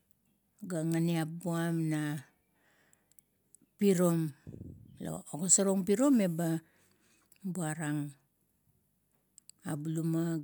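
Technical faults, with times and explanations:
Nothing technical jumps out here; the speech comes across without any faults worth flagging.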